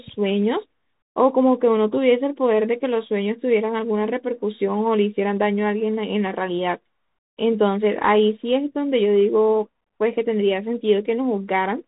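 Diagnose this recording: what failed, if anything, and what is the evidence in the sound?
The failure is at the codec stage: the speech runs through a Bluetooth CVSD headset codec throughout. Nothing passes above 3.8 kHz, so a spectrogram shows a hard ceiling there. The one-bit delta coding adds audible grainy hiss and scratchy, distorted sibilants, consistent with a 64 kbps stream.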